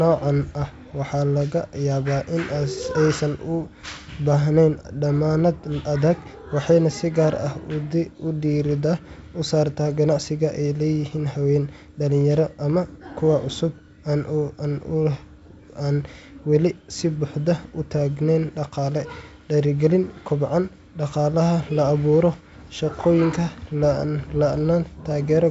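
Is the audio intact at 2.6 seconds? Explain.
Yes, at 2.6 seconds the speech is intact, with no fault, only the ordinary wideband G.722 telephone coding at 64 kbit/s, whose band limit leaves nothing above about 7.7 kHz.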